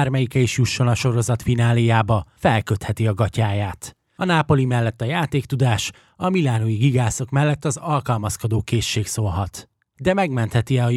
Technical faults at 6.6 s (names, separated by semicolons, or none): none